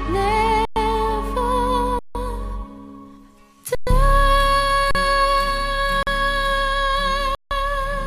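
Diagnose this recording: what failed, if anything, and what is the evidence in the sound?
Underrun with held sample at the output buffer: the sound freezes flat for 40 to 160 ms at 0.65, 1.99, 3.75, 4.91, 6.03 and 7.35 s, then resumes where it stopped, so no hard click.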